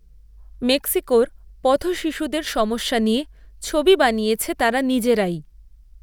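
A speech clip carrying clock slip clicks from 0.12 s to 6.02 s: a steady train of faint ticks about every 30 ms, around two hundred in all, heard as a soft rattle, clearest on louder passages and vanishing in pauses. The likely cause is two unsynchronised clocks differing by roughly 700 ppm, forcing a single sample to be dropped or repeated each time. A spectrogram shows thin, evenly spaced vertical broadband lines; the waveform shows tiny one-sample steps.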